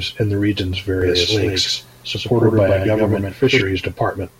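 From 1.02 s to 3.62 s, just after "in the region's", the speech sounds doubled: a second, equally loud copy trails about a tenth of a second behind, with no reverb tail, cutting in and out abruptly. This doubled audio track likely comes from the signal being captured twice through paths of different speed.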